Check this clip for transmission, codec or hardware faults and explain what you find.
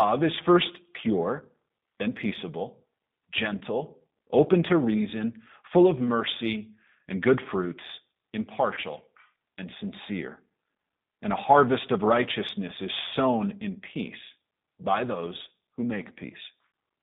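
Two faults are present: codec damage across the whole clip, and two brief concealed dropouts.

G.729 codec, throughout: the speech is rebuilt at 8 kbit/s from a vocal tract filter, a pitch predictor and a few pulses per frame, inside a band of roughly 150 Hz to 3.7 kHz. The result is plainly audible, with a rough, synthetic speech quality and no content above the band.

VoIP packet loss concealed by the speech codec, at 3.58 to 3.63 s and 8.74 to 8.80 s: each gap is about 30 ms of missing audio, which points to a single lost packet. The decoder fills it by extending its last pitch and filter at falling gain, producing a buzzy tone or coloured noise that fades. Because each frame builds on the one before, the speech stays weak or distorted briefly after the stream resumes.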